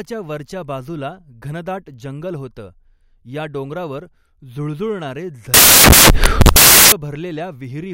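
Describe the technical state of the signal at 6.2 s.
Samples built from the wrong bytes affect 6.2 s, within a span from 5.54 to 6.92 s. Each sample's bytes are misassembled, so the rapidly changing low bits become the dominant part of every value. The speech is replaced by loud, harsh broadband noise.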